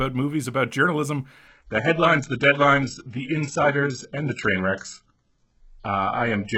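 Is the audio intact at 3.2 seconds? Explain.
No, at 3.2 s you're inside an adaptive stream at a lower bitrate, running from 1.48 s, just after "movies about journalism", to the end. The stream dropped to a much leaner encode, probably a low-bitrate HE-AAC variant, so nothing sits above 8 kHz and the top end sounds thin.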